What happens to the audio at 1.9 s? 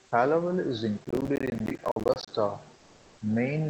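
At 1.9 s the sound is inside a burst of gritty, tearing crackle that runs from about 1.05 s to 2.29 s, where tiny hard-edged dropouts chop the audio over and over. This is processor overload crackle: the processor falls behind and misses its deadline for buffer after buffer, each one apparently around 10 ms long. Every miss leaves a short slice of silence with abrupt edges. Dozens of these in a row fuse into the crackle, which clears once the load eases.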